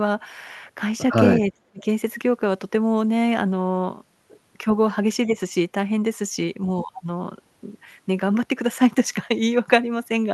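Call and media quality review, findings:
Speech suppressed in double talk. Speech level drops at 1.41–1.86 s, about 40 dB deep. Shallower dips of about 5 dB at 4.64–4.68 s and 5.25–5.38 s. Likely the echo canceller attenuating near-end speech during far-end activity. Opus call path audible, top end near 12 kHz, consistent with roughly 40 kbps.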